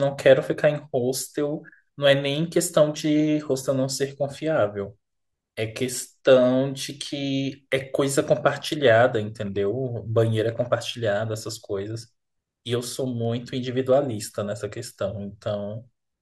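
From 12.20 to 13.25 s the speech carries CD scratch ticks: six brief clicks, roughly five per second, none longer than about a millisecond. A surface flaw exceeded error correction on each disc revolution, so the player patched or muted the damaged samples.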